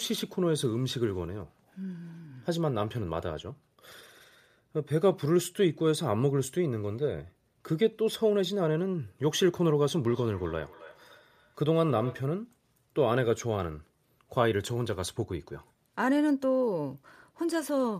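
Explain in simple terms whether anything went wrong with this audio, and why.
Something did go wrong: a feedback echo between two devices. Two devices in the same room were on the call together, so one device's loudspeaker played back what the other's microphone had sent, and that microphone picked it up again. Each device's echo removal only handles its own playback, so the loop went unchecked. From 10.1 to 12.28 seconds the speech comes back as a quieter, thinner, ringing repeat about a third of a second behind.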